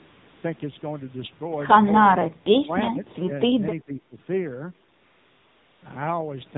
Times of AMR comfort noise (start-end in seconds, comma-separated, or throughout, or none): 0.00-0.44, 4.94-5.82